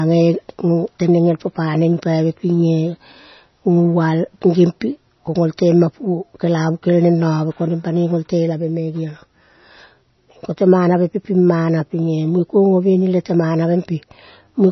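From start to finish, the speech has no content above 5.9 kHz. The top end simply stops there. Weak detail flickers in and out, giving a watery, swirling texture. S sounds turn metallic and chirpy. Consonant onsets smear rather than snap. The damage is heavy and constant. The likely cause is MP3 compression at a starved bitrate, which fits roughly 24 kbps. The encoder cuts the treble at a fixed point and drops quiet frequency lines frame by frame.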